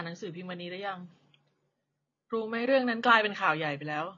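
From start to finish, the speech carries AAC compression damage, likely from AAC-LC coding at a low bitrate, which fits roughly 24 kbps. Nothing survives above 7.2 kHz, and sibilants and held vowels take on a warbling, fizzy smear as the coder starves or noise-fills bands frame by frame. A simple low-pass filter would dull the top just as much but leave what remains clean; here the audible texture gives the codec away.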